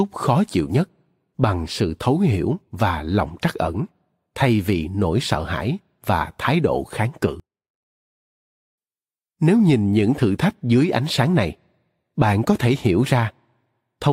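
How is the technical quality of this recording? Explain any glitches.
There's one clear glitch. From 7.40 to 8.78 s the speech drops by about 29 dB to a faint copy. That's most likely one channel inverted: with one side's polarity flipped, the shared centre content cancels when summed to mono, leaving only a faint residue.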